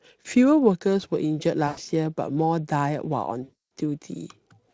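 At 1.67 s, VoIP packet loss concealed by the speech codec cuts in. The decoder lost packets and kept extrapolating from its last pitch and filter. The speech smears into a buzzy tone or coloured noise that fades until 1.79 s. The gap fits about 100 ms of lost audio. A longer dropout hits at 3.43 s, lasting to 3.52 s. It fits roughly 280 ms of missing frames. Recovery is slow, so the voice stays weak briefly afterwards. The Speex coding itself adds little audible damage.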